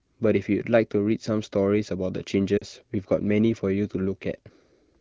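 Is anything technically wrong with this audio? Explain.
Yes. Between 2.57 and 2.64 s there are lost AMR speech frames. Radio errors corrupted the incoming frames, so the AMR-WB decoder, which otherwise codes this speech clearly at a higher wideband rate, filled the 40 ms gap, about two 20 ms frames, by repeating its last good pitch and vocal-tract settings at falling gain. That gives a brief smeared, warbling dip that fades quickly, and the speech resumes weak or rough for a moment.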